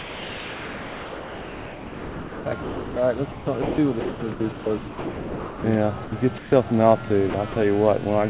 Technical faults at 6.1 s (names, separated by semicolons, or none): sound dropped by the voice detector